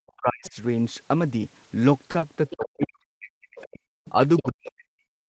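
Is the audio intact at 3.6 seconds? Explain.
No. At 3.6 s you're in the middle of speech suppressed in double talk, which runs from about 2.55 to 3.8 s and eats roughly a second of the talker in total. The talker's level falls away in chunks, at its deepest about 40 dB down, so parts of it nearly vanish. The likely cause is both ends talking at once: the echo canceller couldn't tell its own talker from the loudspeaker echo, so it clamped down on everything.

Right at that moment there's also a brief scrap of the other side's voice leaking through, from 3.58 to 3.65 s. It's short and faint, sitting about 25 dB under the talker, a little fragment of a second voice. That's likely residual echo: the far end was playing out of the loudspeaker, and the canceller didn't scrub all of it from the microphone signal during that window.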